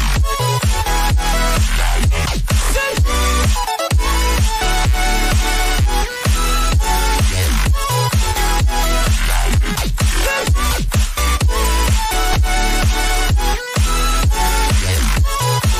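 Load changes in the computer's processor, graphics card or mouse are feeding into the audio circuit's shared ground, so the sound carries computer activity noise from start to finish. It comes through as a buzzing, scratchy layer pulsing at roughly a hundred times a second, sitting only a couple of dozen decibels below the wanted sound. Because it follows the machine's workload rather than the audio, it flickers and shifts independently of anything in the recording.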